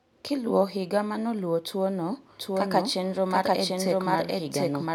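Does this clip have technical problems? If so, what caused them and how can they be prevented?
Yes. A doubled audio track starts abruptly at 2.40 s and lasts to the end. A full-band copy of the speech trails about 0.7 s behind, at roughly equal level, with no decay. A slower second capture path is likely mixed in. Record from one input path only.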